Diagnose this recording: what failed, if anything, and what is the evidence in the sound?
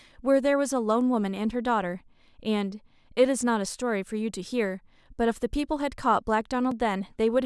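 A block of digital silence sits near the end of the speech, at 6.71 s. It lasts about 2.7 ms. The signal drops straight to silence and returns with no fade. At this length it is heard as a single tick. The failure is likely at the driver or buffer stage. The output buffer likely was not filled in time and went out as zeros. The hole's length fits one 64-sample buffer.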